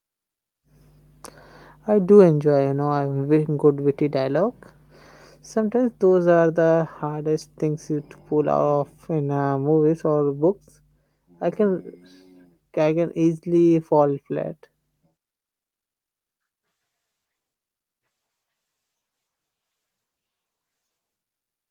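No technical faults are audible.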